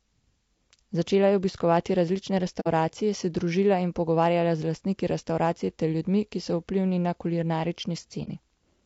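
A speech clip with a rough, grainy texture throughout. Noise fills the gaps between the voice harmonics, and the top band sounds thin and synthetic. The likely cause is low-delay AAC compression of the AAC-ELD kind used in video calls, at a rate that fits about 32 kbps. Its short frames resolve pitch harmonics poorly and leave little to spend on detail, so the damage is plainly audible. On a spectrogram the harmonic lines look smeared, the spaces between them are speckled with noise, and the upper band looks blocky or patchy instead of continuous. There are also two short holes from AAC frame loss with muting, where the decoder zeroed the missing spectrum and the overlapping windows faded the sound out and back in. The first runs from about 2.60 to 2.68 s, between "je obiskovati različne" and "se družila in pogovarjala", which fits two lost frames. The second runs from about 8.24 to 8.28 s, consistent with one lost frame. 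Each shows as a soft-tapered dip in the waveform and a soft-edged gap across all frequencies in the spectrogram.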